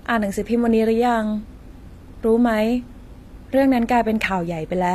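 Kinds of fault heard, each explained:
HE-AAC compression: the treble, likely rebuilt from copied lower bands, makes s sounds plainly gritty, with nothing above 14.9 kHz, which fits roughly 24 kbps.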